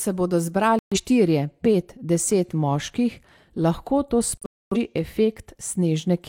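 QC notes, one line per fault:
0.79–0.97 s, digital broadcast dropout: the speech cuts to silence for about 128 ms, fitting three failed frames that the receiver muted until good data returned.
4.37–4.77 s, digital broadcast dropout: two silent holes totalling about 300 ms, the longest 256 ms, fitting roughly seven corrupted frames muted by the receiver.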